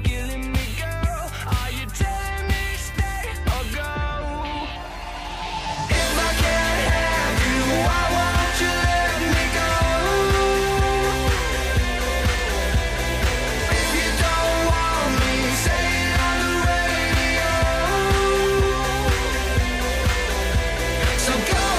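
Nothing here calls for comment, as the audio runs along without any technical faults turning up at any point.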